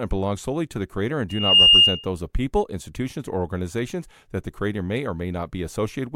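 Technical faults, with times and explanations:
1.29 to 2.08 s, loudspeaker feedback squeal: A single tone at 2.8 kHz rises out of the speech and swells over about a third of a second. It then sits well above the voice, roughly 15 dB louder, until it cuts off. The microphone is hearing the loudspeaker it drives. At that one frequency the loop gives back more than it receives, so the tone keeps feeding itself until the loop is broken.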